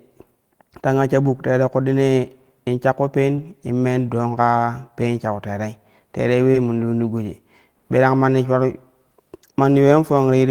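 At 1.27 to 1.29 s, a lost packet rebuilt from error correction: a low-bitrate copy carried in the next packet fills 20 ms, so there is no gap, only a briefly rougher, noisier texture. After "in shakko peen", at 3.35 to 3.39 s, short concealed packet loss extrapolates the previous sound for 20 ms, giving a smeared wobble rather than roughness. Another rebuilt packet then follows at 3.37 to 3.39 s. The same pairing recurs: concealment at 6.51 to 6.56 s, then, after "shau terei terei", a rebuilt packet at 6.54 to 6.56 s.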